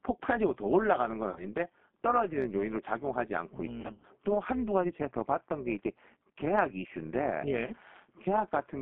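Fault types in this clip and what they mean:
G.729 codec: Low-rate speech coding consistent with 8 kbit/s G.729A, band-limited to 200 Hz–3.5 kHz, with plainly audible rough, synthetic texture throughout.
overlap-add ripple: Frames rejoined with overlap that doesn't sum evenly, so level swings about 6 dB at around 200 Hz, heard as a metallic buzz with extra tones around each note throughout.
VoIP packet loss concealed by the speech codec: Decoder extrapolates over gaps at 1.29 s, 3.81–4.06 s and 7.66 s, producing stretched, buzzy or noisy sound that fades.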